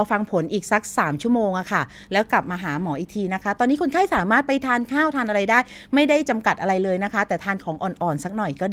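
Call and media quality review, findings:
No audible faults found.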